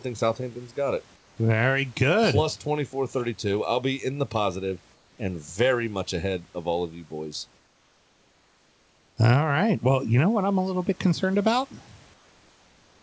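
A speech recording in which comfort noise replaces the background in four pauses: 1.16–1.37 s after "got it", 4.94–5.18 s, 7.58–9.17 s after "all of you boys", and 12.14 s to the end after "little bit concerned about". In each gap the room's background noise gives way to a smooth, featureless noise about 3–4 dB quieter, likely from discontinuous transmission with synthetic noise filled in at the receiver. The band stops at 8 kHz, which points to a wideband call codec.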